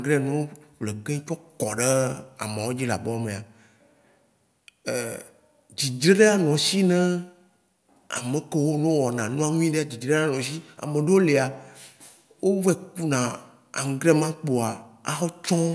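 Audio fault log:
Nothing stood out on listening to this speech recording.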